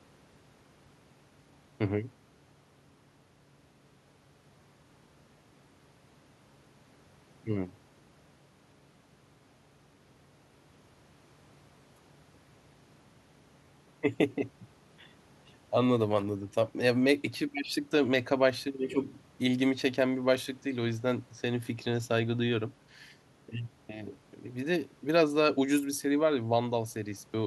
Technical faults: none

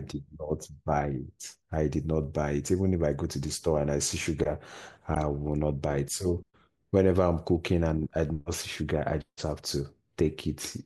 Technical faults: corrupt frame decoded

